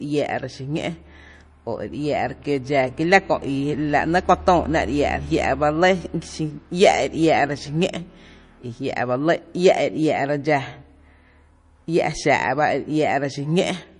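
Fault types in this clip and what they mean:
MP3 compression: The speech sounds watery and swirly for its whole length, with the damage plainly audible, and nothing is present above about 10.6 kHz, where the treble has been cut off cleanly. This points to a low bitrate, likely around 40 kbps, where the encoder runs short of bits, drops the top band and zeroes weaker frequency components that then flicker in and out between frames, giving s sounds a chirpy, metallic edge and softening consonant attacks.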